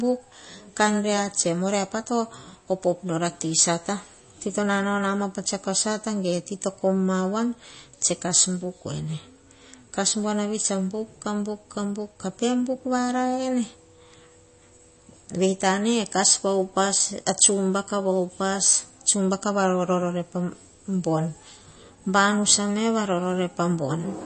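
From start to finish the speech carries MP3 compression damage, plainly audible, with nothing above about 8.3 kHz. The likely cause is an encoder starved of bits, at a rate consistent with roughly 32 kbps. To save data it has cut the treble at a fixed point and dropped weaker frequency lines, which flicker in and out between frames. The result is dull, watery sound with swirling texture, metallic chirps on s sounds, and softened consonant attacks.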